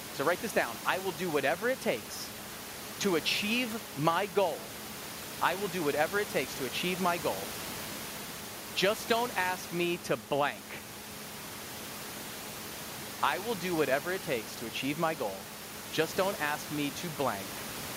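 No technical faults are audible.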